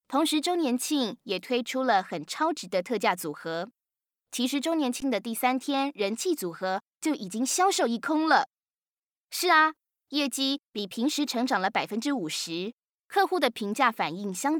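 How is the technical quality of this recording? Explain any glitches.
The recording has one glitch. At 5.00 s there is an underrun with held sample. The output buffer ran dry for 16 ms. The converter froze on its last value, so the sound flattens into a brief stall. Almost nothing was lost. Playback resumes where it stopped, so the ending is soft.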